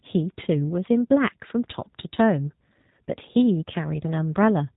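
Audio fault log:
throughout G.729 codec: the speech is band-limited, with nothing above 3.8 kHz, and has a plainly audible rough, synthetic edge. Each 10 ms frame is resynthesised from a vocal-tract filter, pitch prediction and sparse pulses, which fits an 8 kbit/s G.729A stream.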